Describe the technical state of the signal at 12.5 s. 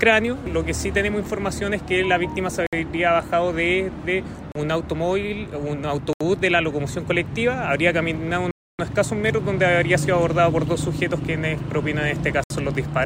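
At 12.5 s the signal is just recovering from a Bluetooth stall: sound drops to silence from 12.44 to 12.50 s, about 66 ms, likely because interference delayed packets and the headphone buffer ran empty. The waveform shows a flat-line gap and the spectrogram a blank vertical strip.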